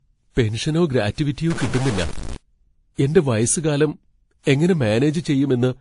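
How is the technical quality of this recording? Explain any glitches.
The recording has two faults: a codec-chain coloration that runs the whole length, and a short burst of digital distortion.

Throughout, the speech carries mixed compression artefacts and nothing above about 10.6 kHz, most likely transcoding between lossy codecs. The texture points to a low-rate Vorbis encode, roughly 34 kbit/s, re-encoded as WMA near 64 kbit/s. The second codec spends bits on the first one's smearing, and the earlier band limit stays.

From 1.50 to 2.36 s a digital distortion sits on the speech, with noise filling its pauses, likely a stuck bit. One data bit held at a fixed value throws about half the samples off by a set amount, and near-silent stretches fill with noise.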